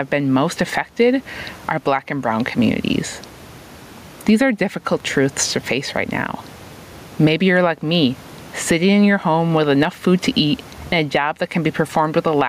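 A speech recording with gain pumping from start to finish. The room noise sits about 35 dB below the voice, and the gain swings by around 15 dB, so loud and quiet passages sound squashed together. The likely cause is input gain set far too high, with a fast limiter or compressor clamping down on peaks. Unlike a noise gate, which silences gaps, this pulls the level down on loud sounds.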